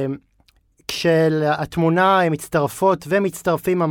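Listening to the speech, nothing stood out as a technical fault at any point.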